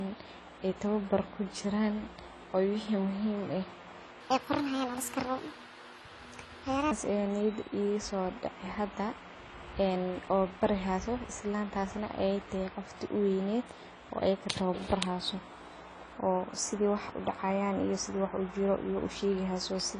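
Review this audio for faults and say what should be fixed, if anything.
Throughout, the speech sounds dull, with a lowered top end and a fizzy, warbling smear on sibilants. This is likely AAC compression at a low bitrate, consistent with about 24 kbps AAC-LC. Unlike a simple low-pass filter, it leaves hollow or noise-filled bands. Encode at a higher bitrate.

From 4.21 to 6.91 s, a section at the wrong speed plays 1.38 times fast, raising pitch about five semitones. Unlike a pitch shift, the tempo hurries too, likely from a clock mismatch during editing. Keep sample rates consistent across every edit and playback stage.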